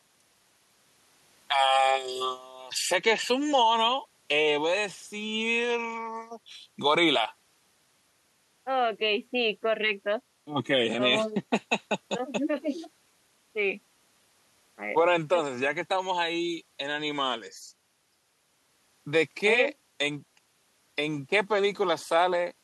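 No technical faults can be heard anywhere in the recording; the speech signal stays intact and continuous throughout.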